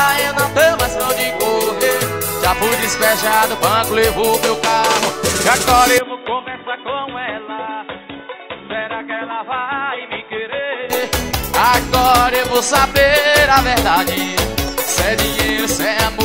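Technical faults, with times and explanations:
5.98–10.9 s, input switched to a poorer device: The sound drops about 10 dB, turns dull with nothing above 3.8 kHz, and gains faint new hiss. A likely switch to a narrower microphone.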